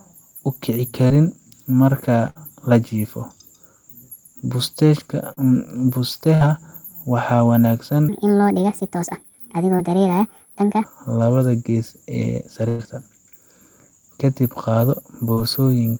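Speech, with three kinds of fault. Short concealed packet loss occurs at 1.07, 5.33, 9.76 and 15.33 s. Each time about 20 to 40 ms of the signal failed to arrive, and the receiver bridged it with 22 to 35 ms of extrapolated sound. It comes across as a momentary smear or wobble, and a small piece of a sound can drop out. What separates these from the bursts is brevity: the patch is too short to develop into an audible held tone. Bursts of packet loss fall at 2.30 to 2.37 s and 6.35 to 6.42 s, each losing about 60 ms, and at 12.69 to 12.81 s, losing about 100 ms. Here several consecutive packets went missing, so the concealment had to run longer, 55, 57 and 104 ms. The last sound stretches into a held buzz or hiss that fades, and then the audio resumes further along with the intervening material gone. The 12.69 s burst never falls to silence. From 8.09 to 10.84 s a section at the wrong speed plays about 1.49 times fast, which raises pitch by roughly seven semitones. 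The likely cause is playback against a mismatched clock. Unlike a pitch shift alone, tempo rises along with pitch, so the passage sounds both higher and hurried. The short loss at 9.76 s falls inside this sped-up stretch.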